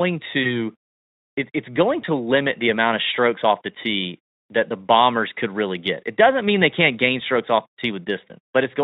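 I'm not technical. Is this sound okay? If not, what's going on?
No. At about 0.43 to 0.59 s and again at 2.01 to 2.05 s, the speech briefly smears into a buzzy or noisy, fading blur. That's VoIP packet loss concealed by the speech codec: a 20 ms chunk never arrived, so the decoder stretched the last sound to cover it, then needed a moment to recover.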